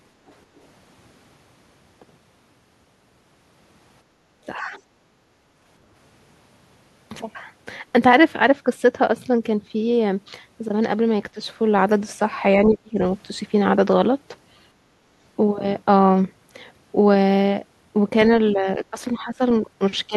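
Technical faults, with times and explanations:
0.27–0.33 s, other side's voice leaking through: There's a very faint scrap of a second voice here, well buried, somewhere around 35 dB under the talker, and gone in a few hundredths of a second. It's most likely far-end audio from the talker's own loudspeaker that got back into the mic, with the echo canceller leaving a residue behind.
4.04–4.28 s, background gated by the echo canceller: The room sound sags for about a fifth of a second, bottoming out around 8 dB down, then comes back up. That's the canceller clamping the mic while the loudspeaker was active and releasing once it went quiet. You hear it as the background briefly pulling away and returning, rather than as any change in the talker.
4.56–4.76 s, 11.34–11.38 s, 12.66–12.99 s and 18.53–20.16 s, speech suppressed in double talk: The talker's own level keeps ducking. There's roughly a 10 dB dip at 4.56 and a quick 10 dB nick at 11.34. 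The dip at 12.66 is much harder, around 25 dB, close to a cutout. In the last stretch to the end, the talker dips by around 15 dB over parts of it. This is likely both ends talking at once, with the canceller unable to tell the talker from the echo and turning everything down.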